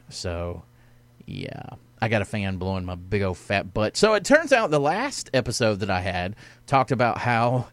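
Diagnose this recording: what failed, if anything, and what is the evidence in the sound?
Nothing in the chain failed here; listening through the speech, no stage from the wiring to playback leaves any mark on the sound. There is no event with a time to point to, so the diagnosis is simply that no fault is present.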